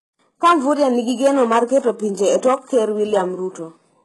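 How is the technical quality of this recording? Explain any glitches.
The speech here has heavy codec damage throughout. It's most likely HE-AAC compression at a very low bitrate, around 12 kbps: the treble is rebuilt by copying lower bands upward, so sibilants sound gritty and lispy, and nothing reaches above 11.5 kHz.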